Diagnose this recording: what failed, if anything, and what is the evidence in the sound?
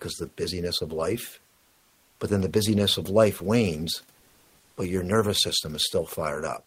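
From 1.55 to 2.19 s, roughly 640 ms, the room noise sitting about 41 dB under the loud parts turns into a flat, detail-free hiss, about 1 dB quieter. That's comfort noise in place of the background, likely codec DTX (Opus-style) muting the sender while the receiver synthesizes filler noise.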